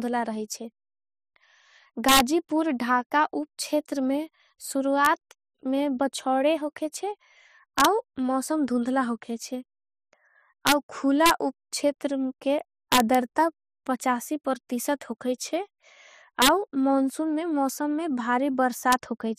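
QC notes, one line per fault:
2.09–2.20, 5.05, 7.79–7.85, 10.67–10.72, 11.26–11.31, 12.92–13.15, 16.42–16.48, 18.92 s, integer overflow: speech peaks pushed up to about 3 dB past full scale wrap to the opposite sign, giving harsh cracks. The waveform shows peaks jumping rail to rail, and the spectrogram shows broadband vertical streaks.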